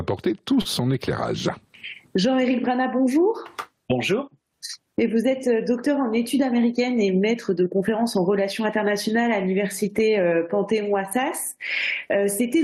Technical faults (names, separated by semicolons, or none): gain pumping; short stall from a late packet